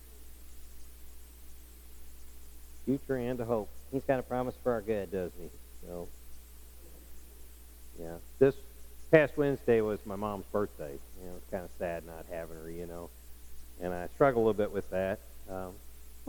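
From 3.52 to 5.07 s the sound runs about 1.09 times fast and roughly 1.5 semitones sharp, a wrong sample rate fault that fits 44.1 kHz material played at 48 kHz. Unlike a pitch shift or time-stretch, speed and pitch rise together.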